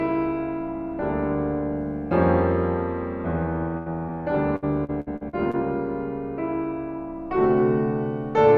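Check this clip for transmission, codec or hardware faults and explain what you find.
Three packet-loss faults turn up in this music, all in the middle of the clip.

From 3.77 to 3.88 s there is a burst of packet loss: the music stalls into a held, fading tone, then jumps ahead. About 80 ms went missing, and the receiver filled roughly 85 ms by stretching the last sound and fading it before resuming.

At 4.07 to 4.10 s comes a short concealed packet loss, a brief smear or wobble in the music. Around 20 ms never arrived, so the decoder patched the hole by continuing the preceding sound for about 12 ms and blended back.

From 4.56 to 5.55 s the music turns choppy, the robotic sound of repeated packet loss. About half a dozen gaps, the longest 64 ms, were each patched by extending the last sound, so about 27% of that second is concealed rather than real audio.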